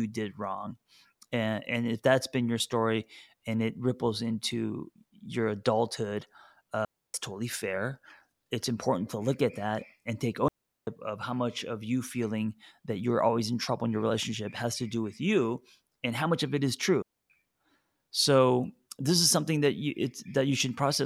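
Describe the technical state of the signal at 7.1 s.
At 7.1 s the speech sits inside a digital wireless dropout running 6.85 to 7.14 s: the receiver mutes for about 293 ms, leaving a clean, noiseless hole.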